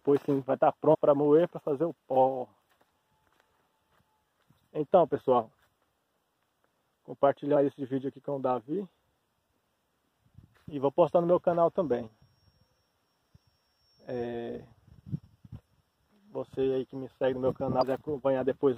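Damaged data in a compressed stream produces brief glitches at 0.93 to 0.95 s, 7.55 s and 17.81 s, where corrupted bytes derail the decoder until it resyncs on a later frame header.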